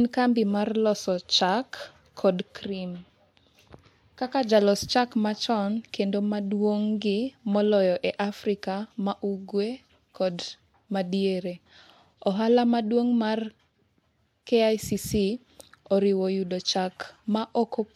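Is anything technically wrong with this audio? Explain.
No, nothing technically wrong can be heard in this speech recording.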